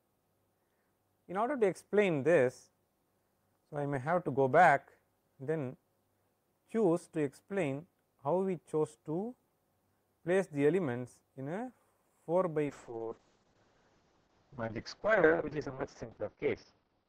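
At 12.66 s a call bitrate drop sets in and lasts to the end of the clip. The encoder is starved of bits, so coding turns coarse and rough, and the top end falls from 20 kHz to 6 kHz, consistent with a fall from about 32 to 6 kbps.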